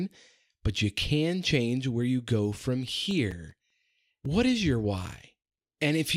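CD scratch ticks run from 3.11 to 3.90 s, just after "where you go from": five brief ticks, each only a few milliseconds, recurring with each disc revolution where a scratch defeated error correction. A block of digital silence hits at 3.31 s, a 5.33 ms hole, which fits a 256-sample buffer left unfilled. The sound cuts out and back with no fade. Another, 2.67 ms long, which fits a 128-sample block, ticks at 4.25 s, just before "what is your".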